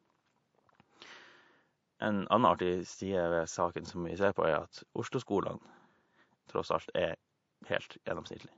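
From start to finish the speech carries plainly audible MP3 compression damage, likely from encoding at a low bitrate, with the sound pointing to something near 48 kbps. Short of bits, the encoder has dropped weak frequency lines that flicker on and off between frames, so the speech takes on a watery, swirling quality, s sounds turn metallic and chirpy, and consonant onsets smear. Faint room noise sits about 49 dB below the speech.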